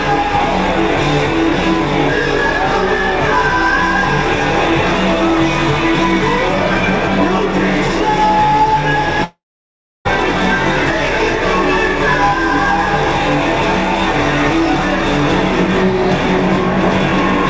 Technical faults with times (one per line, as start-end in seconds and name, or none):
9.24-10.07 long network dropout